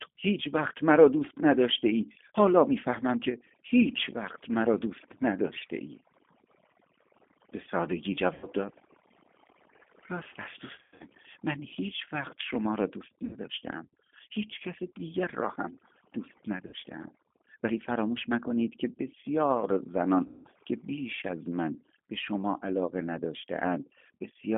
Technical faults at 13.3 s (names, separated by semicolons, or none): overdone noise removal; G.729 codec; VoIP packet loss concealed by the speech codec